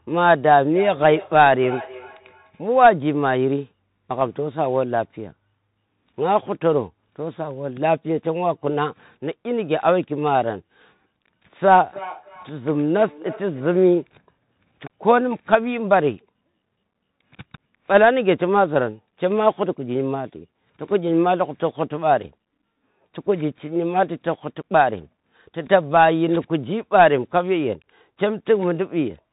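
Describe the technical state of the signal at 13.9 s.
At 13.9 s the feedback echo between two devices is still running, from 11.82 to 14.04 s. A second device replays this microphone's audio back into it, and no canceller removes it, so each syllable returns roughly every 0.3 s, thinner and ringing. At its loudest it is about 17 dB below the direct sound. On a spectrogram, faint copies of each burst trail it at that steady spacing. The waveform shows small repeated envelopes between the main peaks.

Throughout, including this moment, the Bluetooth CVSD headset codec is audible. It codes the signal as one-bit up/down steps with an adaptive step size, which fits a 64 kbps headset link. Sibilants sound scratchy, loud bright sounds distort, and a granular hiss sits underneath. The spectrogram shows a hard ceiling at 3.8 kHz with a noisy floor below it.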